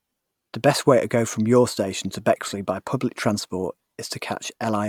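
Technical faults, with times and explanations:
Nothing stood out on listening to this speech recording.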